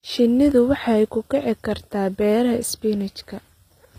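Throughout, the speech was likely passed through HE-AAC compression at a bitrate near 24 kbps, with the treble rebuilt from copied lower bands. Above the crossover the sibilants sound gritty and metallic, the damage is plainly audible, and nothing remains above 15.5 kHz.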